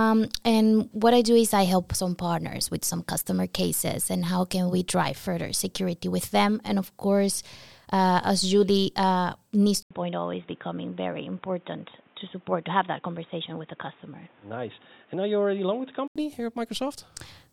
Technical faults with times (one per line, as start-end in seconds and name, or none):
9.83-16.16 input switched to a poorer device